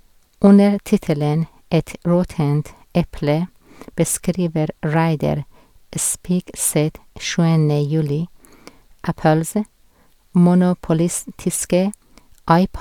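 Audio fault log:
No audible faults detected.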